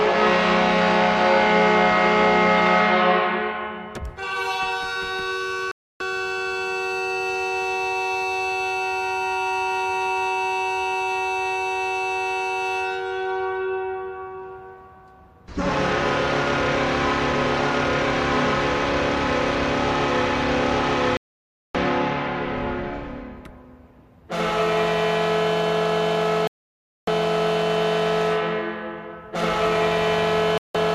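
Digital broadcast dropouts: the receiver lost valid frames and muted until good ones returned. The sound cuts to silence at 5.71 s for 0.29 s, 21.17 s for 0.58 s, 26.47 s for 0.6 s and 30.58 s for 0.17 s, then resumes with that material missing.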